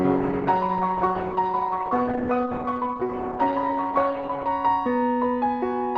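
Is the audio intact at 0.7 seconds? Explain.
No. At 0.7 s the clip is inside an adaptive stream starting at a low bitrate, running from 0.0 to 4.48 s. The player began on a low-bitrate rendition for a fast start, and the thin, dulled treble and stronger codec artefacts fit roughly 12 kbit/s Opus.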